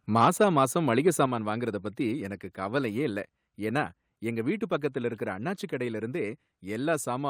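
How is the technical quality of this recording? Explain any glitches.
The recording has two linked glitches close together, just before the speech continues with "வாங்கறதப் பத்தி எனக்கு கவலையே".

From 1.07 to 1.24 s there is microphone overload. The loudest part of the speech turns harsh and crackly, with a gritty edge. The likely cause is an input level set too high, so peaks ran about 2 dB past the converter's ceiling. Their tops were sliced flat on roughly one percent of samples, and that flattening produces the crackle.

At 1.26 s the microphone volume is stepped down. Voice and background both drop abruptly by about 5 dB in a single jump rather than a smooth fade. Coming right after the distorted peak, this is likely the call software reacting to the overload by cutting the device's input gain in one step, which makes the level fall audibly.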